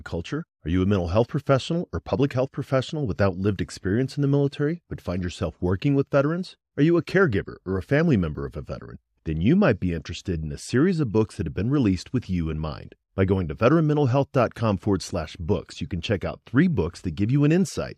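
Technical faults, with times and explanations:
No technical faults can be heard in this speech recording.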